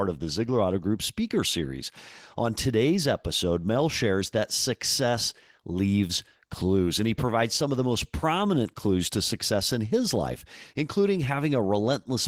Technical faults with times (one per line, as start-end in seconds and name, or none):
none